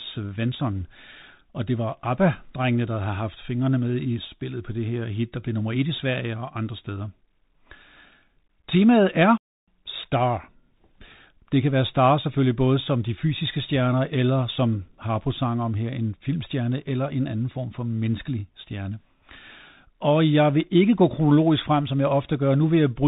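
Bluetooth CVSD headset codec, throughout: one-bit up-down coding with an adaptive step strips everything above 4 kHz, roughens s sounds and lays granular hiss under the speech.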